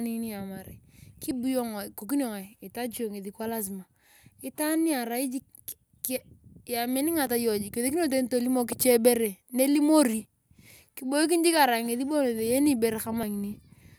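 At 1.31, 7.27, 10.25 and 13.23 s the speech skips forward slightly, dropping a tiny sliver of roughly 20 ms and butting the two sides together. That's likely audio missing between chunks, with the 3 s spacing pointing to a 3-second processing block.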